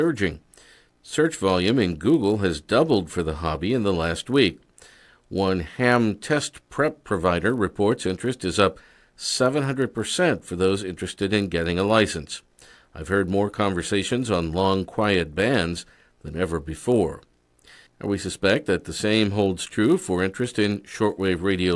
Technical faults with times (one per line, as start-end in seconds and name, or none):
0.00-21.76 resampler restarted on every block